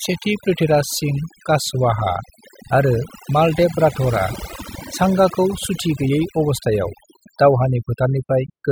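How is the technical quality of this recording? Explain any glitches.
The recording has one clear problem running through the whole clip: overdone noise removal. A denoiser was pushed too hard, so any frequency band that sits close to what it thinks is noise gets pulled way down or shut off entirely, and the softer parts of the speech get caught along with the noise. You can hear it in the gaps, where the background drops and breaks up into little twinkling specks.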